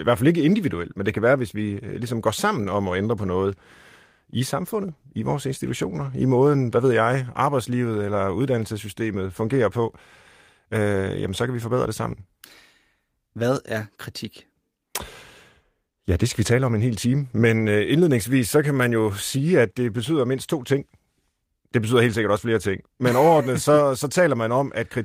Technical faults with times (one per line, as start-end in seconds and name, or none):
none